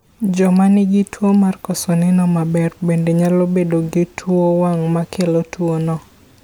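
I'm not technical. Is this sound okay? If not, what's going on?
Yes, this sound is okay, with nothing going wrong in it.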